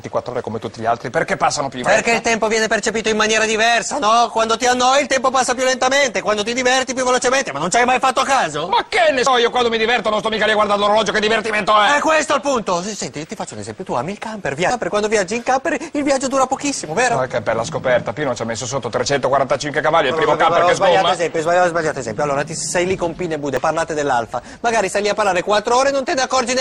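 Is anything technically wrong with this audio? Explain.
Yes. There is damaged data in a compressed stream at 1.84, 9.26, 14.70 and 23.57 seconds. Each time, corrupted bytes make the decoder misread a frame and lose sync until the next frame header. Each event is a very short blip or chirp in the sound.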